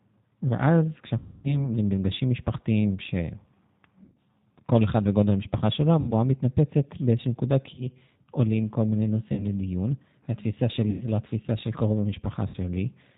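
The whole clip carries the G.729 codec at 8 kbit/s. Nothing above 4 kHz survives. The speech sounds rough and plainly synthetic.

VoIP packet loss concealed by the speech codec occurs at 1.18–1.68 s, 4.04–4.16 s, 6.00–6.13 s, 7.74–7.86 s, 9.33–9.46 s, 10.90–11.06 s and 12.48–12.57 s. The audio lost in each runs from 40 to 260 ms, the longest being the first. The decoder stretches the last sound into a fading buzzy tone or coloured noise, and the speech stays weak briefly afterward.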